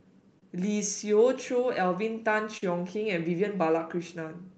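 Around 0.39 s and again at 2.57 s there's short concealed packet loss. About 20 ms and then 40 ms of the call arrived too late. The decoder patched each gap by extending the preceding sound before easing back in, so you get a quick smear or wobble. The second patch runs about twice as long.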